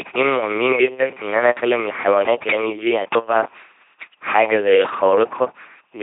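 Throughout, the speech has passed through an LPC-10 vocoder, which rebuilds each moment from a ten-pole vocal tract filter driven by either a pulse train or noise, never both. The damage is heavy, consistent with 2.4 kbit/s: a buzzing robotic voice, stray buzz or hiss, nothing above 3.8 kHz.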